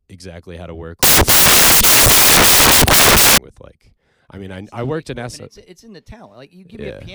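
A speech recording that turns into loud, harsh broadband noise from 1.03 to 3.38 s. These are samples built from the wrong bytes: each value is assembled misaligned or byte-swapped, so the rapidly changing low bits dominate.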